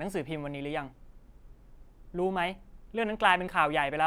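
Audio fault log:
No faults heard anywhere in this speech recording.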